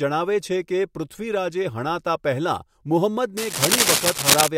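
A worn cable or connector was likely being moved during this speech recording, its contact resistance jumping erratically. That produces cable scratch noise from 3.37 to 4.48 s: dense, uneven bursts of scratching and rustling that sit roughly 5 dB above the speech itself.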